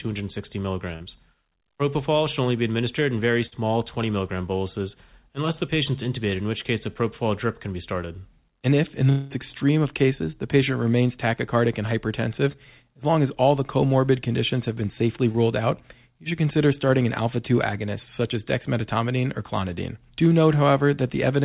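Short concealed packet loss hits this speech recording at 0.96–1.02 s, 12.52–12.56 s and 15.32–15.36 s: each time, between 20 and 40 ms of audio failed to arrive, and the receiver patched the hole by extending the preceding sound before blending back, leaving a brief smear or wobble. A burst of packet loss at 3.46–3.54 s removes about 60 ms in one run; the decoder carries the last sound forward while turning it down, giving a short held buzz or fading hiss before the speech resumes slightly further on. A long network dropout is the likely cause of the gap at 9.10–9.32 s, where about 200 ms is missing and is covered entirely by a synthesised continuation that fades, without settling into silence, before real audio returns past the lost part. All of this is heard through a G.711 A-law call path at 64 kbps, whose band ends at 4 kHz.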